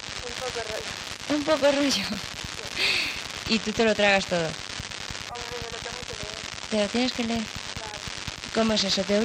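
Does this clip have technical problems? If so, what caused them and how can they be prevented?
Yes. From 0.33 to 3.45 s there is crude rate conversion. The sample rate was changed by simply picking the nearest existing sample rather than filtering, and the pattern fits a 48 kHz to 44.1 kHz conversion. Those repeated picking errors form shifted, inharmonic copies of the sound itself, sitting roughly 20 dB below it, so loud and bright moments gain a gritty, inharmonic fizz. Converting with a proper band-limited resampler, or recording at the delivery rate, prevents it.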